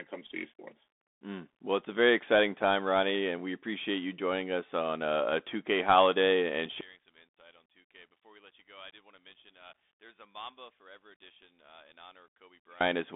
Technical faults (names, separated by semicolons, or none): Bluetooth CVSD headset codec; one channel inverted